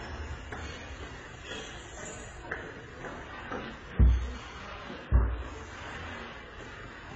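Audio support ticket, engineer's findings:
Throughout the clip: nothing above about 8.3 kHz, dull top end, with artefacts from more than one codec heard together. Likely transcoding between lossy codecs: AAC-family encodes, then MP3, each re-coding the last one's damage. The artefacts point to low bitrates at every stage. The 8.3 kHz ceiling is the lowest cut-off in the chain, and it stays. Worth tracing back to an original source.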